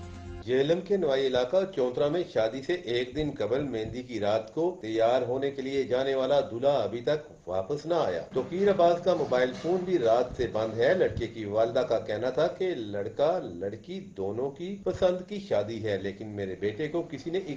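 No technical faults occur at any point in the audio, so there is nothing to describe in time order.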